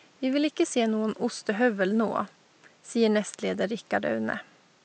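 Nothing's technically wrong with this bit of speech, and the faint room noise sitting about 34 dB below it is just the space the microphone was in.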